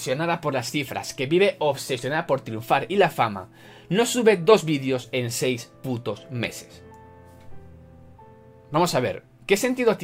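No faults can be heard anywhere in the recording.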